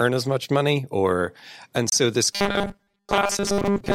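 At 1.88 to 1.93 s, just after "much money or and", a corrupt frame decoded produces a brief glitch. Damaged bits in what sounds like a single compressed frame were played rather than concealed, so misread gains and codes put energy at the wrong frequencies for roughly one frame's length. The frame is filled with the wrong sound.

From 2.33 s to the end of the speech, the sound turns into a rigid, metallic buzz at 200 Hz that still loosely tracks the speech. This is robotic sound from repeated short buffers. The likely cause is audio arriving too seldom, with playback looping the last 5 ms chunk (one over 200 Hz) while most of the real audio is skipped. Unlike a single decoding glitch, the buzz's fixed pitch persists continuously rather than flaring once.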